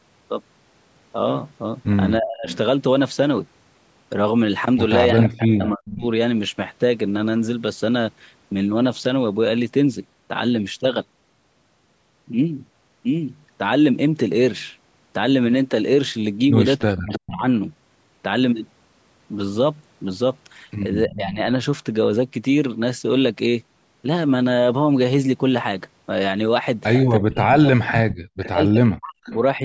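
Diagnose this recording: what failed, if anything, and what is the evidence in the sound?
Speech suppressed in double talk, likely by the call's echo canceller: at 2.19–6.04, 16.82–17.46, 21.07–21.39 and 27.19–29.64 s, the waveform shows chopped dips of up to about 40 dB, visible as spectrogram gaps.

Echo leak, likely from residual loudspeaker pickup: a copy delayed by 312 ms, about 10–15 dB down, at 2.49–2.57, 5.66–5.96, 17.13–17.19 and 27.93–29.39 s appears as faint, shifted duplicate spectrogram traces.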